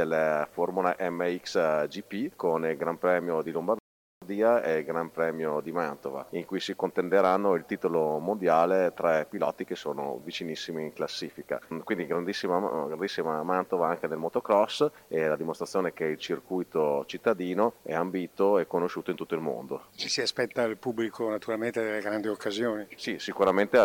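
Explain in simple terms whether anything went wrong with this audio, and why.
Something did go wrong, once. At 3.79 seconds the sound cuts to silence and picks up again at 4.22 seconds. This is a rebuffering stall: the player used up the audio it had downloaded and had to wait for more before continuing. What sets it apart from a dropout is that nothing goes missing. The audio resumes exactly where it stopped, so the only change is about 0.43 seconds of added waiting.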